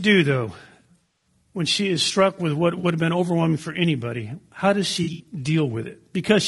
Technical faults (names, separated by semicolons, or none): low-delay AAC compression; AAC frame loss with concealment